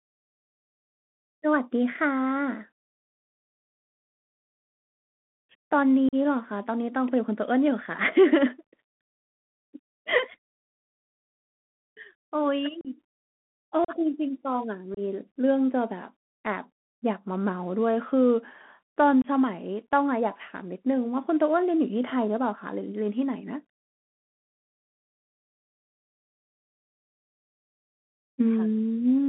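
Bluetooth CVSD headset codec, throughout: the speech has passed through the narrowband headset codec, which encodes each sample as a single up-or-down step whose size adapts as it goes, consistent with a 64 kbit/s CVSD link. The band is squeezed to roughly 150 Hz to 3.4 kHz, so nothing bright survives. The damage is plainly audible: s sounds turn scratchy, loud high-frequency moments smear where the step cannot keep pace, and a fine granular hiss sits under the voice.

Unconcealed Bluetooth headset packet loss, at 6.09, 12.81, 13.85, 14.94 and 19.22 s: audio packets between headset and phone went missing and nothing was patched in, so each becomes a sharp-edged hole of about 41, 38, 38, 26 and 23 ms respectively. Each gap fits several to around ten lost packets. The speech drops out abruptly and snaps back, with a brief dip in level as the CVSD step size recovers.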